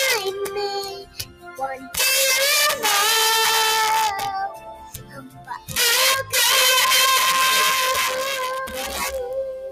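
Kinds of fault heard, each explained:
Integer overflow: The signal is pushed about 9 dB past the top of the integer range. It is not held at the limit. It wraps around to the opposite extreme. Each peak that crosses over jumps across the full range in one step. Only a small share of the samples go over, roughly one in twenty. Those few produce harsh, violent cracks on the loudest moments. They are far sharper and uglier than ordinary clipping.
Noise suppressor applied to music or sounds: A speech-oriented noise suppressor is left running on audio it was not designed for. It treats sustained, steady parts of the sound as noise. It pulls them down, then lets them back up. The level swings by something like 10 dB as it does this. Onsets pass through fairly intact. Held portions and tails sag. The result is a pumping, fluttering, thinned-out character across the whole clip.
Sound cut by the noise suppressor: In three stretches the suppressor judges the sound to be noise. 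It pushes the sound down harder than elsewhere. From 0.86 to 1.97 s the drop reaches about 17 dB. From 4.49 to 5.76 s it reaches about 15 dB. From 8.51 s to the end at 9.71 s it reaches about 10 dB. Steady and decaying material sinks or has its fade chopped short. Sharper events survive better.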